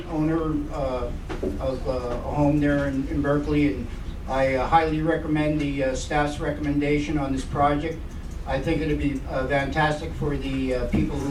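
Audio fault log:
No audible faults detected.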